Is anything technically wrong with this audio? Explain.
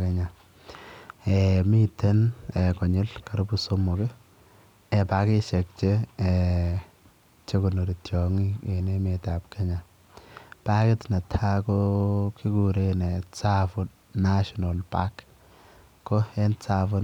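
No, nothing technically wrong can be heard here.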